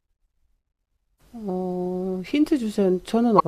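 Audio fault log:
3.36–3.41 s damaged data in a compressed stream: corrupt frames decode as a brief chirp, squawk, click or short hole until the decoder resyncs. The spectrogram and waveform show a short disruption there.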